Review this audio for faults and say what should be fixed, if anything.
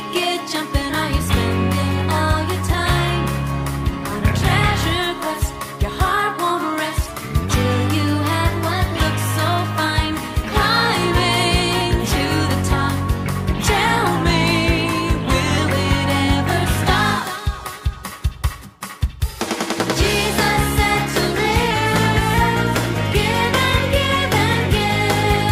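Three stretches where speed and pitch jump together and then snap back: 7.08 to 8.99 s runs 6.2% fast and about 104 cents sharp, while 14.16 to 15.58 s and 21.71 to 22.34 s each run 6.2% slow and about 111 cents flat. That's roughly a semitone each way. It's likely a drift correction step, where clock-matching software changed the playback rate in one jump to refill or drain its buffer rather than nudging it gradually.

To prevent it, have the resampler track clock drift continuously with small, smoothed rate adjustments so the buffer never needs a coarse correction.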